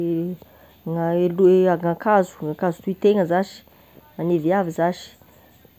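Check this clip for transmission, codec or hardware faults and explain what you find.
Checking this clip turned up no faults to explain.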